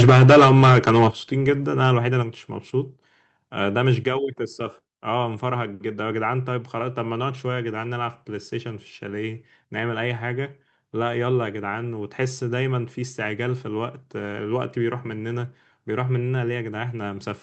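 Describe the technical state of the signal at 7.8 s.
At 7.8 s the speech is intact, with no dropout, glitch or other fault at that point.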